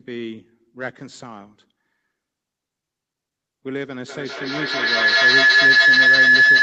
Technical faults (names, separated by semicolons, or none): feedback howl